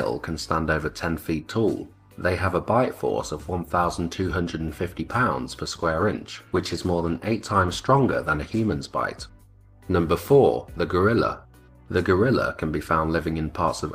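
From 5.75 s to 9.09 s there is a call bitrate drop. The bandwidth estimate fell. The encoder then coded with far fewer bits. The sound turns rough and muffled, with the highs cut. This fits a fall from 40 to 17 kbps.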